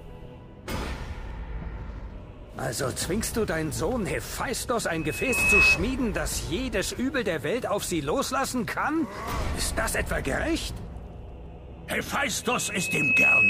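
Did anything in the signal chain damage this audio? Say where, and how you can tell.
Yes. A loudspeaker feedback squeal appears at 4.92–5.8 s and 12.42 s to the end: a 2.6 kHz tone swells in under a second to roughly 10 dB above the sound, because the microphone is re-amplifying its own loudspeaker.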